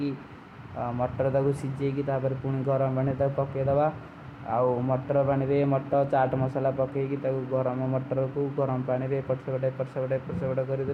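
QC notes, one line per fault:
5.93 s compressed frames skipped: speech jumps ahead about a tenth of a second, roughly five frames, where whole frames of the compressed audio were left out.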